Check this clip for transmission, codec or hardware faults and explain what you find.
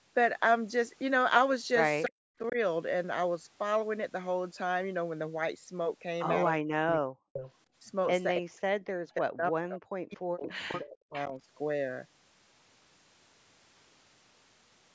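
Yes, there are faults, all tied to echo cancellation on a call.

Speech suppressed in double talk occurs at 2.05 to 2.57 s, 6.52 to 6.77 s and 8.39 to 11.35 s. The speech dips sharply, by around 40 dB at its deepest, and breaks up. The likely cause is an echo canceller that could not separate the talker from loudspeaker echo while both sides spoke, so it turned both down.

Echo leak appears at 6.88 to 7.0 s and 7.33 to 7.53 s, with a 325 ms delay, and at 10.46 to 10.79 s, with a 400 ms delay. Short, faint copies of the speech return, around 10 dB below it. Likely, a loudspeaker's echo was not fully cancelled and was sent back.

Background gated by the echo canceller occurs from 7.05 to 7.33 s. The room sound drops out by about 37 dB, then returns. The canceller clamped the microphone down hard while the loudspeaker played, then released it.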